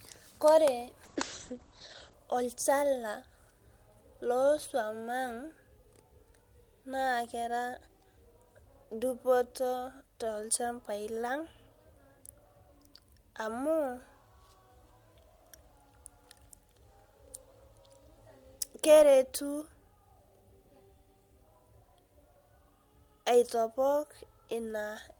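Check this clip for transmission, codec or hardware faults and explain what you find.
There's one fault here, a call bitrate drop running from about 1.05 s to 2.21 s. The call's bandwidth estimate fell and the encoder was pushed to spend far fewer bits, which sounds like a fall from around 32 kbps to roughly 9 kbps. It sat at that low rate for about 1.09 s. The coarser coding makes the speech rough, and the top end closes from 20 kHz down to 8 kHz, so it goes audibly muffled until the rate recovers.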